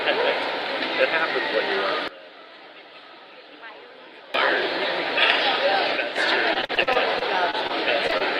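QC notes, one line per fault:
2.08–4.34 s, sudden gain jump: the level and the noise floor drop together by about 19 dB, likely from an unramped gain step. The waveform envelope shrinks abruptly, then snaps back.
5.97–6.18 s, sudden gain jump: there is a brief drop of about 6 dB in both the sound and the background, likely a gain change applied without a ramp. It shows as a step-edged dip in the waveform.
6.53–7.71 s, repeated packet loss (robotic sound): nine gaps up to 41 ms long are patched by extending the last sound, about 19% of the stretch, which gives a choppy result. The spectrogram shows smeared, repeated harmonics with vertical seams.
8.07–8.11 s, 8.11–8.14 s and 8.18–8.22 s, short concealed packet loss: three holes of about 20 ms each are filled from the preceding sound, so it briefly smears. Each shows as a short blurred patch with soft edges.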